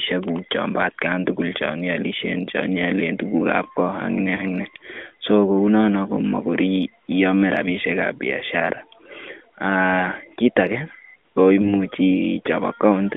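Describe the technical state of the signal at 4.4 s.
A brief dip or warble in the speech, recovering weak or rough, from 4.36 to 4.45 s: one lost AMR speech frame of 20 ms, concealed by repeating the last pitch and vocal-tract settings at lowered gain.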